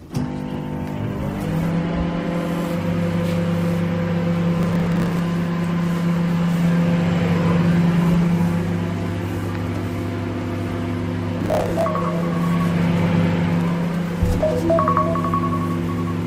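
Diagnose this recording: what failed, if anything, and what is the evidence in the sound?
Adaptive stream starting at a low bitrate, at the playback stage: from 0.0 to 2.0 s the treble is thin and smeared, then it jumps cleanly to better quality, which fits a step from about 16 to 64 kbit/s.

Processor overload crackle, at the driver or buffer stage: gritty tearing from 4.58 to 5.19 s and from 11.4 to 11.83 s, where dozens of roughly 10 ms buffers missed their deadlines and repeated old audio.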